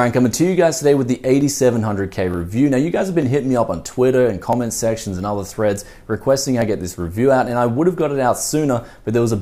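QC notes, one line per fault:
1.41, 2.34, 3.22, 4.53, 5.78 and 6.62 s, dropped samples: six isolated sharp clicks, each a thin vertical line in the spectrum with no sound missing around it. The likely cause is a fraction of a millisecond of samples lost each time, making the waveform jump abruptly.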